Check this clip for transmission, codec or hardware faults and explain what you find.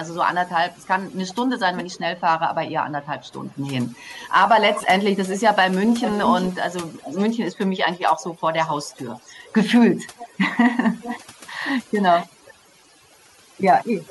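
Two faults stand out: heavy noise removal across the whole clip and a leaking echo of the speech in seven places.

Overdone noise removal runs from start to finish. The background sinks to near silence broken by twinkling specks. A noise reduction stage was set too aggressively: it pulls individual frequency bands far down whenever they sit close to its noise estimate. The quieter parts of the speech fall into that range and are stripped away along with the noise.

Echo leak appears at 0.71–5.39 s, 5.99–7.58 s, 8.21–9.54 s, 10.16–10.38 s, 10.99–11.25 s, 12.1–12.54 s and 14.07–14.1 s. A delayed copy of the speech trails the original by about 385 ms at first, stretching to about 427 ms by the end. It is loudest at 5.99–7.58 s, only a little below the speech, and faintest at 8.21–9.54 s. The likely cause is a loudspeaker-side echo canceller that missed part of its microphone pickup and sent it back.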